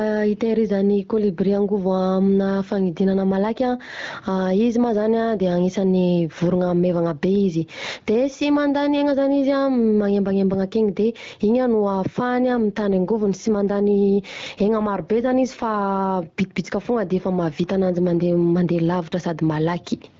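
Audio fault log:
Throughout: gain pumping. The gain swings by something like 15 dB, and loud and quiet syllables sit unnaturally close in level, giving a squashed, breathing quality. This is likely an input gain set far too high, with a fast limiter clamping each loud sound. On a waveform the speech peaks sit at a fairly even height. On a spectrogram loud and quiet passages show similar energy.
12.38 to 16.12 s: AMR rate drop. For almost four seconds the wideband speech coding falls from 12.65 to 8.85 kbit/s, so fewer bits describe each frame's pulse excitation. Without any gap or loss of bandwidth, the speech becomes rougher, buzzier and more synthetic, then clears when the rate returns. A spectrogram keeps the same upper edge near 7 kHz, but harmonics turn smeared and grainy, with blurrier formant tracks. The waveform envelope stays continuous across both transitions.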